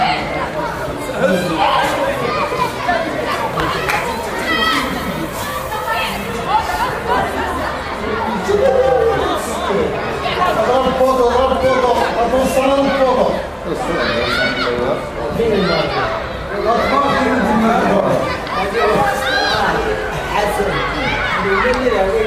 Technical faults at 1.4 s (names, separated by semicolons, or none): none